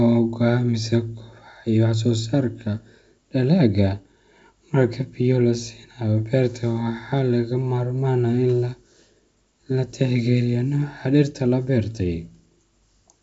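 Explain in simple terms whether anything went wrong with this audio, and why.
Nothing stood out on listening to this speech recording; I couldn't hear anything going wrong with it.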